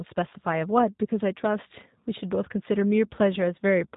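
G.729 codec coding runs through the whole speech clip, and the damage is plainly audible. The speech is rebuilt from a vocal tract filter, pitch predictor and a few pulses per frame, giving a rough, synthetic edge with nothing above 4 kHz, consistent with an 8 kbit/s stream.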